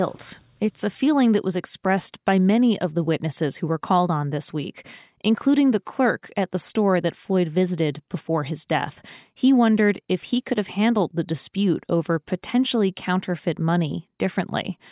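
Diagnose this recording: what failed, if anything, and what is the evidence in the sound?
Nothing failed; no fault is audible in the speech.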